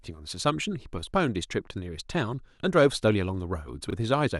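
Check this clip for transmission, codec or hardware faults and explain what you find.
One fault stands out: chunks out of order near the end of the speech.

From 3.88 to 3.93 s, a block of about 21 ms arrives one block late and plays after the block that should follow it. No audio is lost, but the swapped pieces leave three hard joins, heard as a brief jumbled stutter. On a waveform the joins show as sudden steps. On a spectrogram they appear as thin vertical broadband lines, with the harmonic pattern jumping out of sequence between them.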